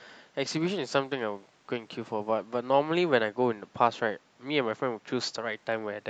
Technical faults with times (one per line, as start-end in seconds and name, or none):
0.50-2.40 Bluetooth SBC bit pool drop
5.53-6.09 Bluetooth SBC bit pool drop